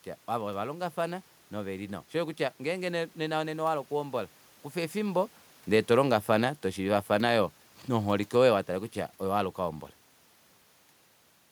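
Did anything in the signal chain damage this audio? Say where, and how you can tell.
Yes. From 4.96 s, just after "oku hombola kufa", the speech and the room noise behind it sink together, easing down by about 4 dB until 9.54 s. This is automatic gain falling in the call-processing stage: the AGC judged the input too loud or its background noise too strong and pulled its gain back gradually. The talker also moves relative to the microphone around 5 s, but that would change only the voice level, not the background with it.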